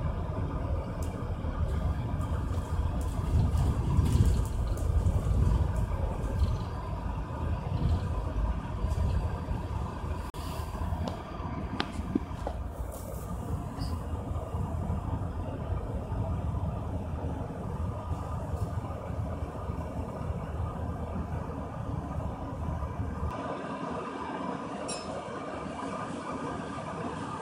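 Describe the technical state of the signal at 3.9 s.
At 3.9 s the signal is intact, with no audible fault at that moment.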